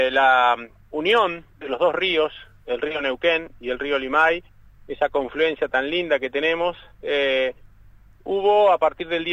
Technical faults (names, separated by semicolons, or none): none